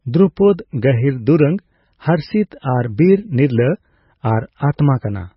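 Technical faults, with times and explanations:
Throughout, MP3 compression: the speech has nothing above 5.6 kHz and a heavily damaged, watery, swirling texture, which likely comes from MP3 encoding at a very low bitrate, roughly 18.6 kbps. Short of bits, the encoder cuts the treble at a fixed frequency and drops weak frequency lines. Those lines blink on and off from frame to frame, producing the swirl, while sibilants turn dull and chirpy and consonant onsets smear.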